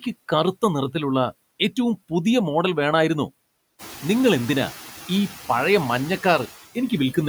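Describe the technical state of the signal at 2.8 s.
At 2.8 s the speech carries noise suppressor artifacts, present through the whole clip. The suppressor pulls bands it judges to be steady noise down by about 15 dB, frame by frame. The noise sinks between the words and rises under them.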